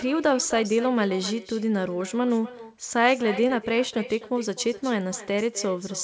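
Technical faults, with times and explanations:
Throughout, echo with no canceller: the far end is playing the call out loud and its mic sends it straight back, so every phrase gets a quieter, thinner shadow about 16 dB down, trailing by roughly 300 ms, the network round trip.
3.48 to 3.51 s, short concealed packet loss: about 20 ms of audio arrived too late, and the receiver papered over the gap by stretching the preceding sound and crossfading back in. You hear it as a quick smear or wobble.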